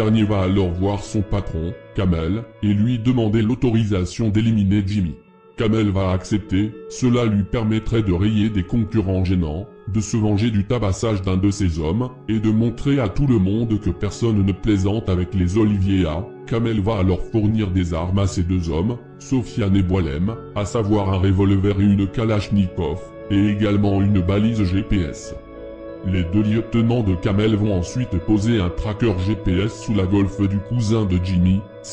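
No technical faults can be heard anywhere in this recording.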